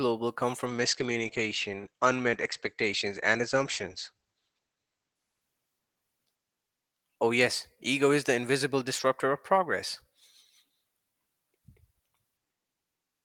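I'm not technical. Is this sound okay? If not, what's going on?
No. From 0.66 s to about 6.73 s there is a call bitrate drop: the call's connection judged it had less room, so the audio was squeezed into far fewer bits, staying at its lowest for about 4 seconds. To save space, everything above 8 kHz was discarded, so the speech sounds muffled and dull, with a rough, watery texture, until the fuller, clearer sound returns after 6.7 s.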